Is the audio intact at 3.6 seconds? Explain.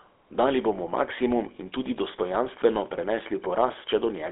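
No. At 3.6 seconds the speech is still carried through the GSM full-rate codec, which runs for the whole clip. It models the vocal tract and excites it with sparse regular pulses, giving a plainly audible buzzy, gravelly roughness, with a 300 Hz to 3.5 kHz line band and nothing above 4 kHz.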